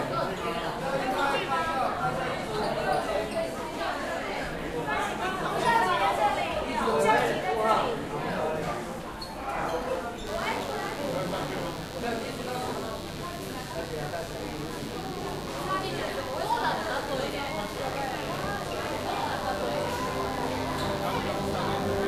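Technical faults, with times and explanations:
10.27–22.08 s, mains buzz: a steady, raspy 50 Hz buzz, roughly 15 dB under the sound, from switching spikes twice per cycle with harmonics reaching kilohertz.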